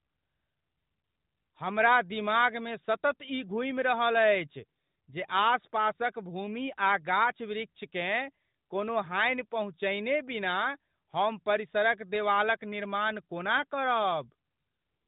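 Speech, with no technical faults to report.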